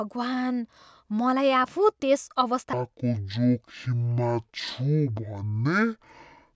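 Wrong sample rate from 2.73 s to the end: the audio is clocked out at half its intended rate with no conversion, which fits material recorded at 32 kHz played at 16 kHz. Speech slows to 0.5x speed and drops 12 semitones, an octave lower, sounding sluggish and deep.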